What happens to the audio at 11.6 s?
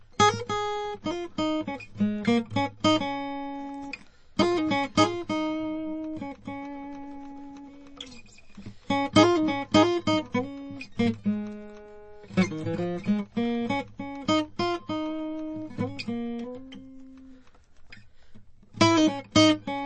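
At 11.6 s the music is still under MP3 compression, likely at a starved bitrate near 32 kbps. Everything above 8.3 kHz is cut and weak components flicker, so it sounds dull and watery throughout.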